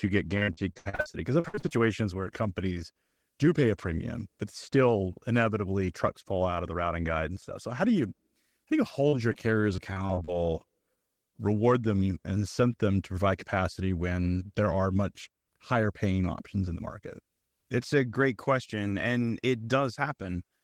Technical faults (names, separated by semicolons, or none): repeated packet loss (robotic sound); short concealed packet loss